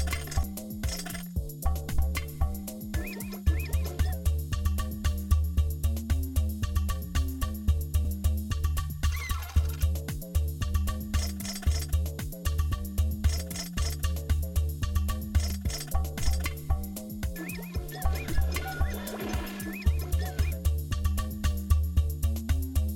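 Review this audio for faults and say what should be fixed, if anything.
Three short blips, at 0.43 s, 8.05 s and 15.50 s, each lasting only a few milliseconds, come from damaged data in a compressed stream: corrupted bytes made the decoder misread those frames and lose sync until it found the next valid frame header. Checksumming files and verifying transfers, with error detection on streamed frames, would stop corrupted data from reaching the decoder.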